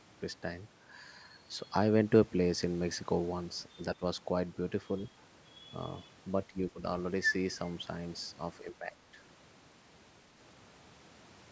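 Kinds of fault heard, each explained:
Speech suppressed in double talk: the speech sinks by about 10 dB in bites at 3.75, 3.95, 6.48 and 8.64 s, the longest a fraction of a second, likely because an echo canceller could not separate this side's talk from the other side's loudspeaker echo and turned both down.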